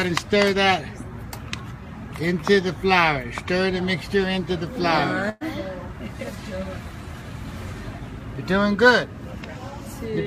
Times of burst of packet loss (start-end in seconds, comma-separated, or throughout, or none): 5.29-5.44